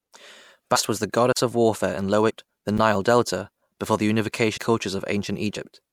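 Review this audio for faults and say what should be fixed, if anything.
The speech has compressed frames skipped at 0.75 s (just before "was the"), 2.29–2.31 s, 4.56–4.58 s (right after "before the") and 5.55 s. Each time the audio jumps ahead, by roughly 100, 300, 200 and 50 ms. Those jumps fit whole frames of about 26 ms going missing or being rejected by the decoder. Worth checking the file's integrity and transport, and adding error concealment on the decoder side.

There are also two blocks of digital silence. The first runs 1.33–1.37 s, a 40 ms hole between "was the" and "of warfare in". The second is a 10 ms drop at 2.78 s. The sound cuts straight out and back with no fade, and the shorter one lands as little more than a tick. Bigger output buffers or a higher-priority audio thread should stop these gaps if they are likely underruns.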